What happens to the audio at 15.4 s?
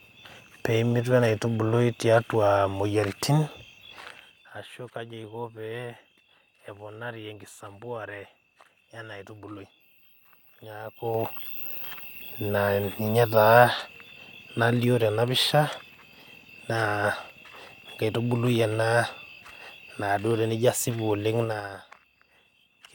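At 15.4 s the speech runs intact, with the level changing smoothly where it moves and no fault to be heard.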